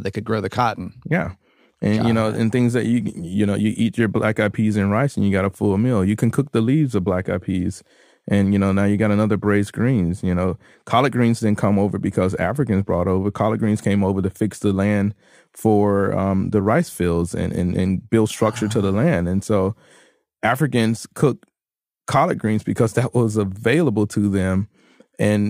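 Sample clock jitter runs throughout: an unsteady converter clock, a few microseconds rms, adds hiss about 40 dB down, tracking loud, bright passages and appearing as level-following broadband haze on a spectrogram.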